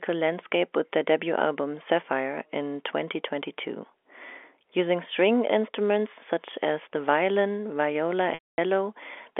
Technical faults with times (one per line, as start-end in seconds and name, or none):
8.34-8.58 packet loss with pitch repetition